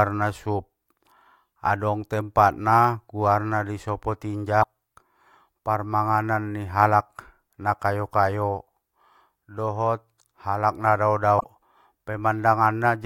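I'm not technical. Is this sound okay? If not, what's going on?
No, there are two short glitches. Right after "adong tempatna guarna sopo", from about 4.60 to 4.65 s, there's a quick glitch, and after "dohot alak nadao", from about 11.37 to 11.44 s, there's another. Both come from damaged data in a compressed stream: a few bytes of the file got corrupted, so the player can't make sense of that bit and loses its place while it hunts for the next good chunk.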